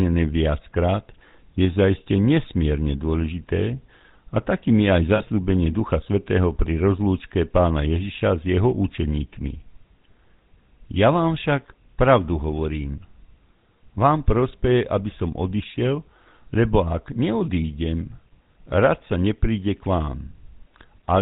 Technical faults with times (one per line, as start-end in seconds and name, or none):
0.00-21.22 GSM full-rate codec
5.16-5.23 lost GSM frames